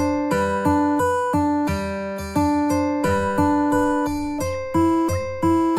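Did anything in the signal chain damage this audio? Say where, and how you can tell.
No, nothing in this audio points to damage at any stage of the chain. No stage, from wiring and conversion through to storage and playback, leaves an audible mark on the signal.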